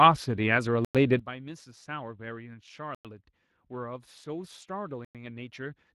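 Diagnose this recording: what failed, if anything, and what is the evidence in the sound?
Codec stage: the speech has a plainly audible Speex codec character throughout, a noisy, hoarse texture where the CELP excitation is short of bits. The degree of damage fits a bitrate of around 22 kbps rather than a high-rate encode.

Storage or playback stage: there is a gap between chunks, with 100 ms hard-edged silences at 0.85–0.95 s, 2.95–3.05 s and 5.05–5.15 s. They recur every 2.1 s, so the audio was handled in 2-second chunks, with dead time inserted at each join rather than content lost.

Processing stage: a sudden gain jump occurs at 1.19 s. Speech and background drop together by about 16 dB in a single step and stay at the lower level to the end. This is likely a digital gain change applied without a ramp.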